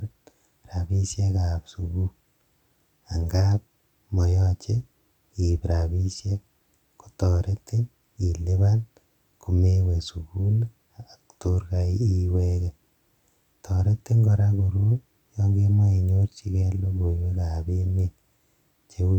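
There are no technical faults to describe at any point in this recording.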